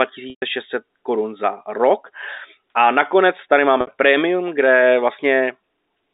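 Packets carrying this telephone-band speech were lost twice, and the receiver concealed each packet loss by repeating the last pitch period. At 0.30 to 0.42 s, before "korun za rok", 120 ms vanish and the held buzz fades toward silence. At 3.81 to 3.87 s, after "nakonec tady", a 60 ms gap becomes a briefly sustained, buzzy tone.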